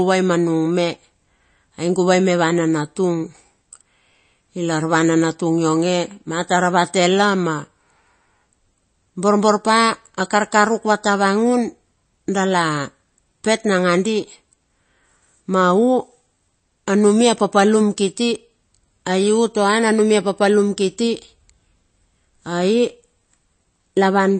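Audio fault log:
Throughout: MP3 compression. The speech sounds plainly watery and swirly, with chirpy s sounds, smeared attacks and nothing above 8.4 kHz, likely from MP3 encoding at a low bitrate near 32 kbps. A spectrogram shows a hard ceiling at 8.4 kHz and weak components flickering between frames.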